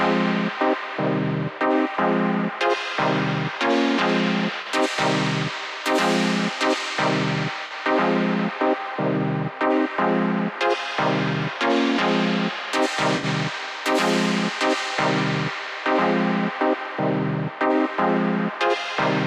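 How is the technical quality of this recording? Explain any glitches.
The recording has three brief AAC frame loss with concealment glitches, at 4.61 to 4.67 s, 7.66 to 7.71 s and 13.17 to 13.25 s. The first two last about 43 ms, which fits two lost frames, and the third about 64 ms, which fits three. The decoder rebuilt each gap from the last good spectrum, so each one sounds like a short smeared, noisy or phasey patch. A plain dropout would go silent instead.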